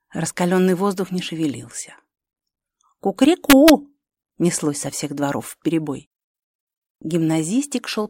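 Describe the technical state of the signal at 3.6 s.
At 3.6 s the signal is inside a stretch of integer overflow running from about 3.50 to 3.70 s. Peaks that exceed the largest representable integer are not held at full scale but wrap around to the opposite extreme, so the waveform jumps across its entire range. The overdrive is about 0 dB, so only the very tips cross the limit, yet each crossing still produces a sharp, violent crack far harsher than ordinary clipping.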